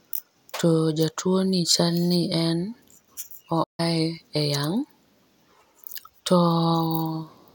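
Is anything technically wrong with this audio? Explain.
Yes. At 3.63 s the speech cuts to silence mid-flow and stays silent for about 150 ms, until 3.80 s. This gap is a playback stall, likely caused by the player running out of buffered data or its output thread being blocked.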